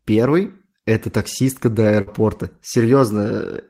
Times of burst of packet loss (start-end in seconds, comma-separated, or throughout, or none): 2.01-2.08